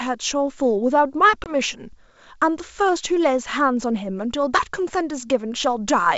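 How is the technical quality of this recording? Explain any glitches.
There's one glitch, a short dropout with a rough recovery, on what sounds like a wideband G.722 call at 64 kbit/s, clear up to around 7 kHz.

That glitch is packet loss on the ADPCM call, between 1.44 and 1.53 s. About one packet's worth of audio, 20 ms, went missing and was filled with silence, so you hear a hard-edged hole. Because ADPCM decodes each sample relative to the last, the receiver's predictor and step size lost sync with the sender's. The speech comes back slightly distorted, then settles by 1.53 s.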